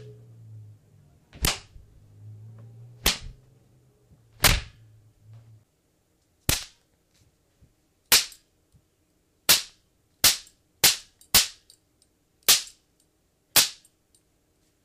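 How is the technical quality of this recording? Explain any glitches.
One fault stands out: CD scratch ticks between 9.20 and 9.82 s. A surface scratch corrupted more data than error correction could rebuild, once per disc revolution. The player patched each gap, leaving six evenly spaced ticks, roughly eight per second, each only a few milliseconds long.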